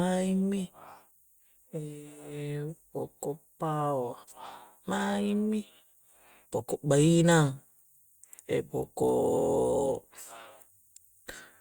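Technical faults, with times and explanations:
Nothing technical goes wrong anywhere in this speech recording.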